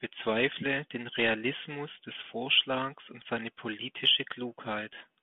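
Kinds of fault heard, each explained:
Nothing in the recording stood out as a fault on listening.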